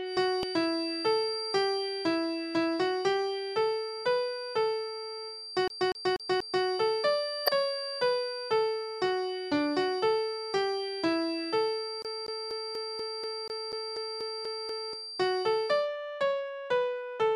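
A thin, steady whistle at 4.7 kHz sits behind the sound from the very start until 15.9 s, swelling and fading slowly in level and staying roughly 10 dB below the main signal. It never grows or runs away, which points to a feedback whistle: the loudspeaker-to-microphone loop is likely poised just at the edge of feedback, so one high frequency keeps ringing without building up.

At 0.43 s a tiny blip cuts through the sound. This is damaged data in a compressed stream. A small stretch of the encoded file was corrupted, so the decoder misread the frame there, lost its place and resynchronised on the next frame header, leaving a brief glitch.

From 5.68 to 6.65 s the sound stutters quickly and evenly. The same 0.24 s fragment plays four times, with a short mute at each jump. This is a CD stuck on one turn: a scratch knocks the laser back one track at the same point on every revolution, so that slice of audio loops.

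At 7.45 to 7.49 s a second short glitch marks another patch of damaged data in the compressed stream, where the decoder again stumbles and finds its footing on the following frame.

From 12.02 to 14.93 s the skipping-CD stutter returns. The same 0.24 s loop repeats twelve times, each with a brief gap, before playback moves on.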